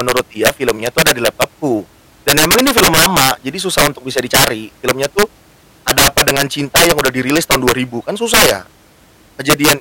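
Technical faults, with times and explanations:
Throughout, integer overflow: the speech was pushed about 15 dB too hot, and a few percent of samples exceeded the integer limit. Instead of being limited, they wrapped around to the opposite extreme, so the loudest peaks become harsh, violent cracks far sharper than ordinary clipping.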